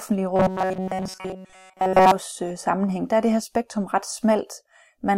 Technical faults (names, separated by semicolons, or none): robotic sound from repeated short buffers